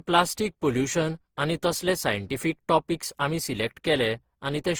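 Throughout the speech, the sound is swirly, smeared and hollow, with softened attacks, though it extends to about 20.2 kHz. That points to generation loss, likely from around seven Opus passes near 48 kbit/s, each requantising on a shifted frame grid and compounding noise and spectral holes.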